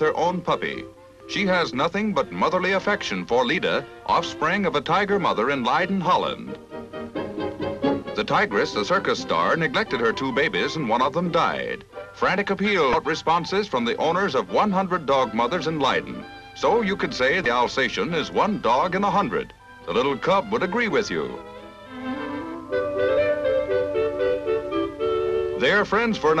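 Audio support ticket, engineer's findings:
Damaged data in a compressed stream, 12.91–12.94 s: short burst, about 30 ms. Corrupted bytes in the encoded file; the decoder misreads the frame and resyncs at the next header. Same signature at 17.43–17.46 s. It differs from a buffer underrun, which leaves a clean gap of silence or a repeated fragment, and from a plain click.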